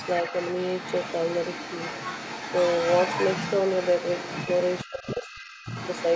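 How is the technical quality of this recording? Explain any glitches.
The recording has two clear glitches, both typical of a speakerphone call.

Other side's voice leaking through, 0 to 6.15 s: a second voice runs under the talker throughout, roughly 10 dB quieter. The likely cause is loudspeaker playback that the echo canceller did not fully remove. On a spectrogram, a fainter, separate set of harmonics overlaps the main speech.

Speech suppressed in double talk, 4.85 to 5.31 s: the talker's voice dips sharply, by as much as 20 dB or so, for around 0.4 s. This is likely the echo canceller turning everything down while both sides spoke. The waveform shows a sudden notch in level there.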